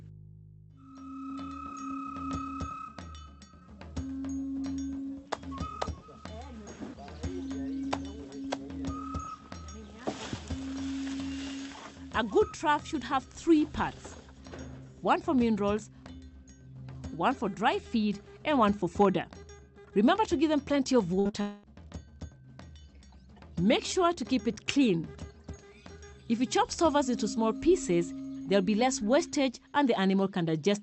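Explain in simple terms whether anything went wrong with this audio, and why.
Yes, something went wrong, all within about half a second, starting at 21.19 s.

From 21.19 to 21.27 s the sound stops moving forward and is held as a fading buzz or hiss, then jumps ahead. This is a burst of packet loss: several pieces of the call were lost or arrived too late, and the receiver stretched the last sound to cover the gap of about 55 ms.

Right after, at 21.27 s and again at 21.31 s, there are two brief smears or wobbles, each lasting a few hundredths of a second. These are short concealed packet losses. Tiny pieces went missing, and the receiver patched each hole by continuing the previous sound before blending back in.

From 21.41 to 21.65 s the sound freezes into a drawn-out, fading buzz or hiss for about a quarter of a second, then resumes with that stretch gone. The likely cause is a long network dropout: nothing arrived for that time, so the receiver kept extending the last sound until the connection returned.

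The call codec also trims the very highest frequencies, above about 8 kHz.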